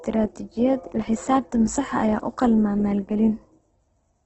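Opus compression runs throughout, likely at a very low bitrate. Bands keep their energy but fill with noise, leaving the speech rough, grainy and cut off above 8.2 kHz.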